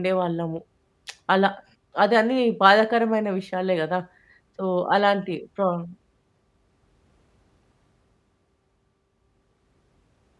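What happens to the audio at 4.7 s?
At 4.7 s the speech continues without any dropout, click, distortion or other break, so the audio is intact at that moment.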